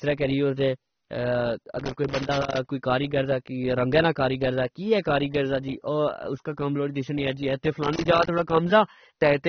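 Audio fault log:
Throughout, AAC compression: the speech sounds dull and smeared with plainly audible codec damage and nothing above 6.3 kHz, likely from AAC-LC at a low bitrate around 24 kbps.
1.79–2.68 s and 7.84–8.50 s, loose connector crackle: irregular bursts of crackle where a worn contact keeps making and breaking, chopping the signal on and off.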